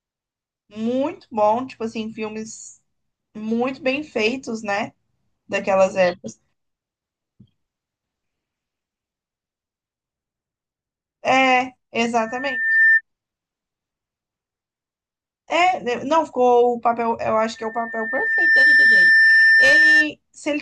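At 12.17 s a loudspeaker feedback squeal rises, a single tone near 1.8 kHz that swells for most of a second and is gone by 13.01 s. It returns at 17.55 s, building for about a second and holding until 20.08 s, ending well above the speech in level. The microphone is hearing its own loudspeaker, and at that one frequency the loop gain tops unity. Unlike a steady interfering tone or hum, it starts quiet and grows by itself.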